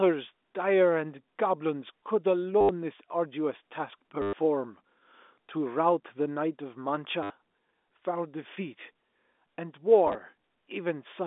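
Around 2.61 to 2.69 s, 4.22 to 4.33 s and 7.23 to 7.30 s the speech drops into a short robotic stutter. That's packet loss with last packet repeated: the receiver kept replaying the last good chunk until fresh audio arrived. The replays seldom line up with the pitch, and the run buzzes at about 100 Hz, which fits 10 ms packets. At 10.07 to 10.15 s the losses are scattered rather than continuous, with no run longer than 10 ms, so you hear small blips instead of a steady buzz. Underneath it all sits the narrow telephone band of G.711 coding.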